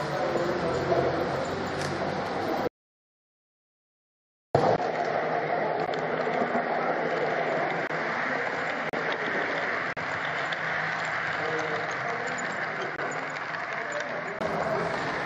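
From 2.68 to 4.55 s an audio dropout to silence wipes out nearly 1.9 s; likely a lost input, since the gap is silent without room tone.

At 4.76 s, after a 20 ms hole, the input switched to a poorer device: duller, nothing above 7.6 kHz, about 5 dB quieter, with a new noise floor, until 14.41 s. This is likely a different microphone.

Gaps between stream segments cut hard-edged holes at 5.86, 7.87–7.90, 8.89–8.93, 9.93–9.97 and 12.96–12.99 s. They are 12.5 to 38.5 ms long and fall on 1 s segment boundaries, and unlike the dropout no audio is lost.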